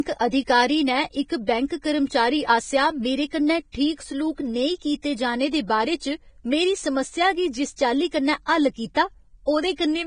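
Right through the clip the speech has that hissy, grainy texture you get from heavy Vorbis compression, most likely at a low bitrate of around 22 kbps. Nothing comes through above 9.7 kHz, and the treble that survives is so coarsely quantised that detail turns into a noisy wash, with roughened tones and softened attacks.

Then at 8.94 s, right after "जिस चाल्ली कन्नै हल्ल", there's a pre-echo. A sharp attack landed late in a transform block, and the codec's noise leaked into the quiet just before it, giving a short hiss about 18 ms ahead of the onset and a smeared attack.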